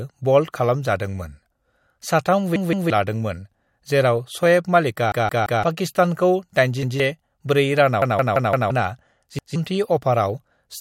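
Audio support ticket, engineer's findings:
Repeated buffer, speech, five stutters: 2.56–2.90 s (piece heard three times), 5.12–5.63 s (four times), 6.83–7.00 s (twice), 8.02–8.70 s (five times), 9.39–9.56 s (twice). Repeated unit about 171 ms, fits an 8192-sample buffer. Output device replayed it while waiting for late audio, dropping roughly 0.15–0.7 s of speech per event. Waveform: identical blocks tiled with hard steps at joins. Spectrogram: copied pattern, vertical broadband lines at each seam.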